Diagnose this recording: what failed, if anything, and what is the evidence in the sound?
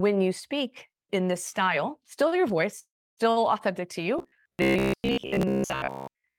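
Two separate problems, both pointing at the network side. First, a long network dropout from about 2.79 to 3.19 s. The sound smears into a fading buzzy tail, then goes quiet for roughly 300 ms before picking up again, and about 380 ms of material never comes back. That's most likely the receiver running out of packets, stretching the last bit it had, and then giving up until data resumed.

Second, from 4.19 s right to the end at 6.39 s, there's robotic sound from repeated short buffers. Everything takes on a hard metallic drone at about 66.7 Hz, which fits a chunk of about 15 ms being replayed over and over. Most of that stretch seems to be repeats rather than fresh audio. This is likely packets arriving too sparsely, with the jitter buffer looping its last slice to cover the gaps.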